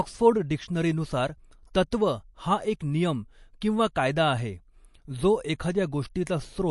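Throughout, the speech has a watery, swirling texture and nothing above 11.3 kHz. This points to heavy MP3 compression, likely at about 48 kbps.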